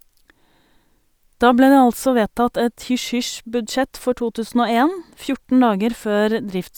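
No technical faults are audible anywhere in the speech recording.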